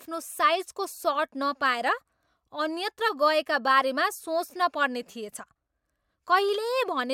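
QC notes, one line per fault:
Nothing stood out on listening to this speech recording.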